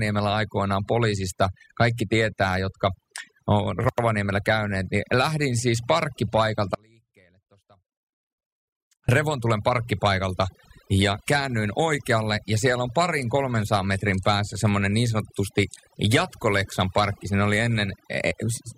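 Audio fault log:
Throughout: overdone noise removal, the reduction is cranked so hard that the background goes near-silent with twinkly specks.
6.75–9.09 s: audio dropout to a faint residue, the speech cuts out abruptly for about 2.3 s, leaving only a faint trace some 35 dB down, likely a lost signal feed.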